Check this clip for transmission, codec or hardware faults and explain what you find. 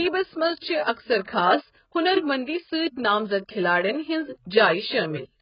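Two codec faults are present. Throughout, the speech has nothing above 5.1 kHz and sounds heavily smeared and warbly, likely from AAC compression at a very low bitrate around 12 kbps, which throws away detail. Pre-echo appears from 0.93 to 0.97 s and from 1.24 to 1.28 s: the codec spreads its noise across each block, so about 40 ms of hiss leaks in before sharp attacks.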